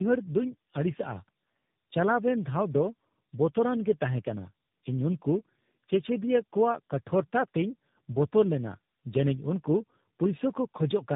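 Tandem speech coding runs throughout the speech. Each link decoded and re-encoded the call with its own speech codec, which fits a chain of three low-rate coders. Each pass compounds the last one's damage, leaving rough, muffled, warbly speech with nothing above 3.8 kHz.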